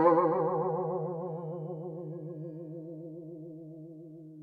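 No technical faults occur at any point in the music.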